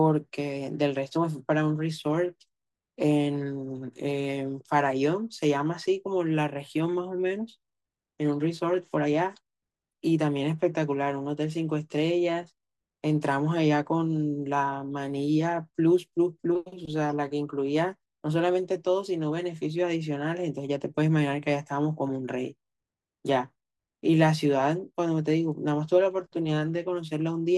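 Nothing stood out as a technical fault anywhere in the recording on listening.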